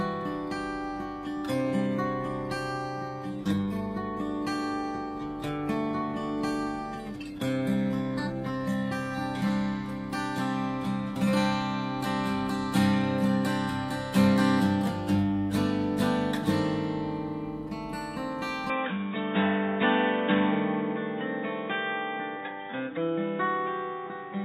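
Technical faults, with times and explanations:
1.49 to 9.49 s, adaptive stream at a lower bitrate. The sound drops abruptly from full quality with no gap in the audio. For eight seconds nothing is left above 14.9 kHz. The upper range turns thin and synthetic, as a low-rate spectral band replication codec rebuilds it, which fits a fall from around 96 kbit/s AAC to a 20 kbit/s HE-AAC version while the connection slowed. Codec artefacts grow audible. Full quality returns just as suddenly.
18.70 s to the end, input switched to a poorer device. The sound turns dull and boxy at once, with no silence at the switch and about the same level. Nothing remains above 3.8 kHz, which points to a narrowband path such as a headset's call profile. A new floor of background noise appears, roughly 45 dB below the signal. The likely cause is the system changing its input microphone mid-recording.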